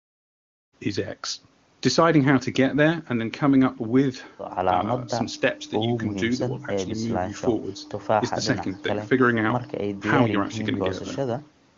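No technical faults can be heard in this speech recording. It fades in smoothly from about half a second to 0.75 s, and the band stops at 8 kHz, as expected from call processing and the AMR wideband (HD Voice) codec at a rate that suggests about 24 kbit/s.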